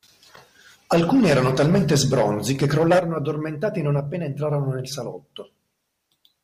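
Speech recording, no technical faults to report.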